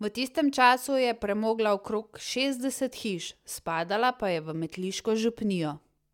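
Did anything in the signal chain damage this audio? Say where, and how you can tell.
No, nothing in the signal chain damaged this audio.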